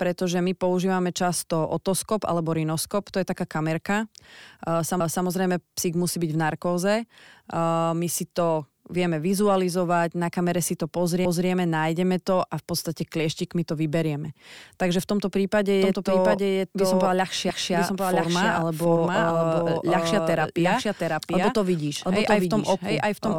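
The audio was cut into chunks of about 6 s that overlap at each join, so a 250 ms stretch plays twice and stutters: at 5.00 s, just before "psík musí byť v", and at 11.25 s, between "na kamere si to" and "nájdeme to a v". From 15.82 s, right after "v tomto prípade", a doubled audio track begins, likely because a second, slower path is capturing the same signal. An undecayed full-band copy about as loud as the original trails it by roughly 0.7 s and stays to the end. Within that stretch, a third chunk join repeats another 250 ms at 17.50 s.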